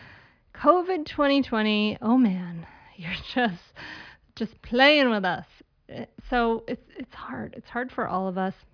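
Nothing in this recording stands out as a fault, with no dropouts, clicks, distortion or glitches to point to anywhere in the run of speech.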